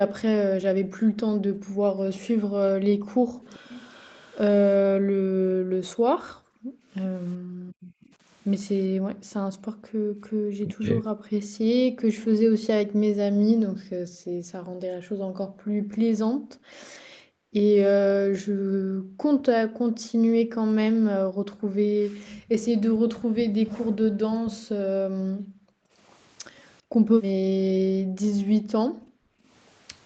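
From 0.78 to 3.44 s, the background is gated by the echo canceller. The room sound drops by up to about 40 dB, for roughly two seconds in total, while the far side plays.

At 2.14 to 2.2 s, a faint delayed copy of the far-end sound comes back, 394 ms late and about 20 dB down. The likely cause is an echo leak, with the canceller missing part of the loudspeaker pickup. It returns at 3.45 to 4.39 s, about 25 dB down.

From 4.96 to 10.35 s, the gating comes back, totalling about four seconds.

At 10.63 to 11.05 s, the near talker dips by about 10 dB for roughly 0.3 s. The likely cause is speech suppressed in double talk, with the canceller ducking both sides at once.

Gating runs again from 11.33 to 29.48 s, for about ten seconds in total. Within it, from 22.25 to 24.6 s, the 394 ms echo leak recurs at about 20 dB below the speech.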